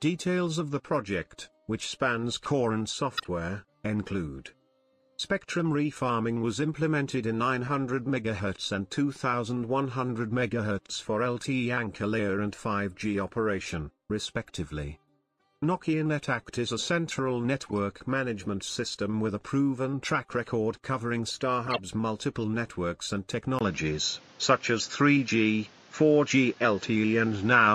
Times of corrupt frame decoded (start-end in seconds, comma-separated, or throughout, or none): 3.17-3.26, 5.25-5.27, 14.48-14.50, 17.66-17.73, 21.67-21.79